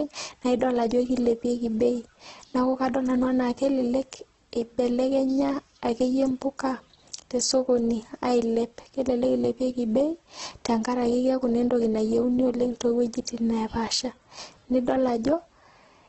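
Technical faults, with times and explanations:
throughout: heavy Opus compression, likely CELT mode near 12 kbps, folds and noise-fills bands, leaving grainy roughness rather than MP3 swirl; nothing above 8.2 kHz.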